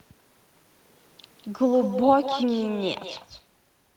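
Echo with no canceller runs throughout this speech clip: every phrase is shadowed about a fifth of a second later by a copy roughly 10 dB quieter and thinner, because the far end's loudspeaker feeds its microphone and nothing strips that return before it crosses the network.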